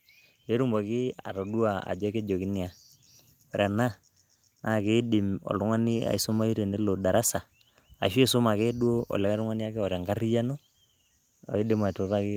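From 1.34 to 2.82 s you can hear the automatic gain rising: the gain control decided the input was running quiet and eased its gain up by about 4 dB over roughly a second and a half. Because it's turning up the whole signal, not just the speech, the room and background noise swell right along with the voice. It comes across as a slow, even lift in level rather than a sudden jump.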